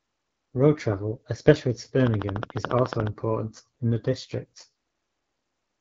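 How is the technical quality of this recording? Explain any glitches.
Technical quality is poor. Codec damage runs through the whole recording, and a burst of clicks cuts in partway through.

Throughout, the speech carries AMR wideband (HD Voice) codec damage. The codec models the voice as pulses through a vocal tract and fills the top band with noise. The plain roughness points to a low rate around 8.85 kbit/s. It sounds raspy, and nothing reaches above 7.5 kHz.

From 2.07 to 3.08 s there is a train of clicks. About fifteen near-identical pulses arrive at a steady 14 per second, peaking well above the speech, around 15 dB. They are likely caused by interference or a struggling interface. They sound like rapid, even ticking.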